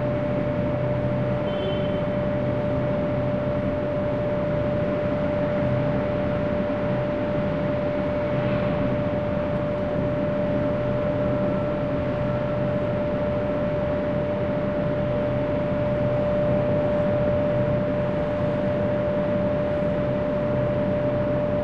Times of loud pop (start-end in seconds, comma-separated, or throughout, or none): none